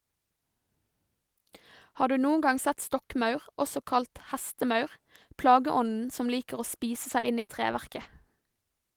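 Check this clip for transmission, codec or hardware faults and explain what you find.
There is one fault: repeated packet loss (robotic sound) from 7.03 to 8.43 s near the end of the speech. Four separate gaps open within that stretch, the longest 80 ms, with about 180 ms missing in total. Each hole is covered by extending the preceding sound, so roughly a tenth of a second is rebuilt rather than received. The speech turns choppy, with small pieces dropping out in quick succession.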